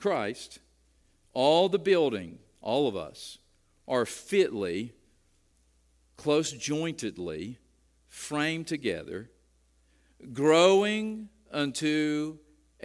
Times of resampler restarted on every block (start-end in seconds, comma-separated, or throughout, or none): 7.48-12.84